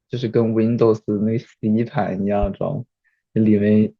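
At 2.43 to 2.46 s, a single loud pop cuts through the speech, peaking a few decibels above it. A sudden voltage pulse, likely from a switch or static, is the cause.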